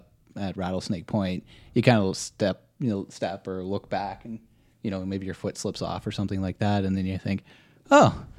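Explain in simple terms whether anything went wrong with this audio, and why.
Nothing went wrong with this speech recording that a listener can hear. At no point does anything break into or disturb the sound, so there is nothing here to explain or fix.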